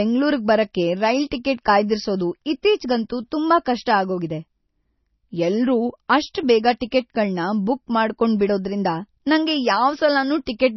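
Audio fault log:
Throughout, MP3 compression: heavy damage with nothing above 6 kHz, likely from an MP3 encode at a low bitrate, around 24 kbps. With bits that scarce, the encoder cuts the treble at a fixed point and drops weak frequency lines frame by frame, giving a dull, watery, swirling sound.
6.33 s, 6.80 s and 6.91 s, pre-echo: a short hiss of about 12 to 14 ms comes just before each sharp onset. The codec spreads its quantisation noise across the whole block, so noise meant for the loud attack leaks into the quiet gap before it, and the attack sounds softened.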